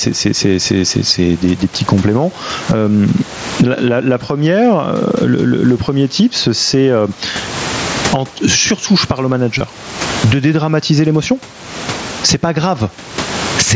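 Gain pumping runs through the whole clip. The level swings by around 25 dB, so loud and quiet passages sit unnaturally close together and the speech sounds squashed. The likely cause is microphone gain set far too high, with a fast limiter or compressor clamping down on every loud moment and then letting go.

Concealed Bluetooth headset packet loss follows at 9.58 to 9.61 s, just after "surtout je parle au". About 22.5 ms of audio went missing between headset and phone, which fits roughly three lost mSBC frames. The receiver bridged the gap by repeating the best-matching piece of the preceding waveform. That patch sounds like a brief, buzzy hold at full level with a faint warble where the real signal resumes.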